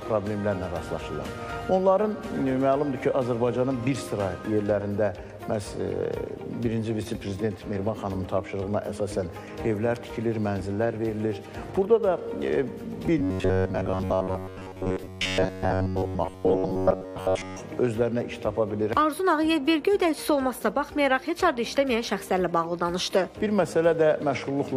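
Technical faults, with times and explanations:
13.19–17.59 s, robotic sound from repeated short buffers: the sound collapses into a rigid, metallic buzz locked at 93.8 Hz that only loosely follows the underlying audio. Most likely, new audio arrived too slowly and the playback filled the gaps by looping a fragment about 11 ms long, so roughly 70% of the real material is simply skipped. A comb-filter colouring or flanging effect would leave everything audible. Here parts of the audio are missing.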